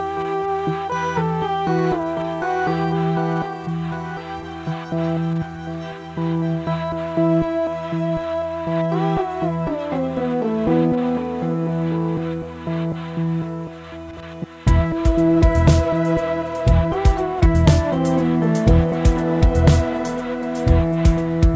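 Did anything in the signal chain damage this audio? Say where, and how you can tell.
No, nothing in the chain damaged it; the audio came over a call path whose G.722 codec, which fits about 64 kbps, leaves nothing above 8 kHz, and that band limit is the codec's normal behaviour, not a fault.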